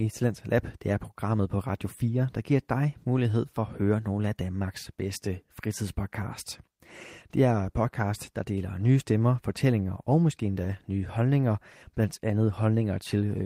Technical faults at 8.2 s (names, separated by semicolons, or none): none